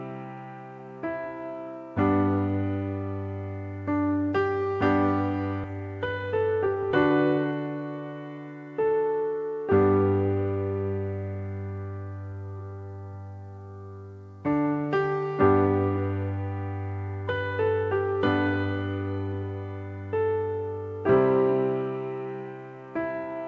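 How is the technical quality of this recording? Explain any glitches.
Two playback glitches stand out, both in the first third of the recording, heard through a wideband call chain whose band limit leaves nothing above 8 kHz, consistent with G.722.

From 5.64 to 5.66 s there is a skip ahead. Roughly 0.7 s of audio was discarded, in transit or by an overflowing jitter buffer, while later audio was already queued. Playback jumps forward with no filler, so the two sides of the missing stretch butt together abruptly.

From 5.73 to 7.52 s a jitter buffer speed-up follows. The buffer was holding more audio than its target, so the receiver trimmed short pitch-period-length pieces repeatedly, removing about 0.15 s in total. The sound runs at roughly 108% speed with unchanged pitch and comes across as hurried.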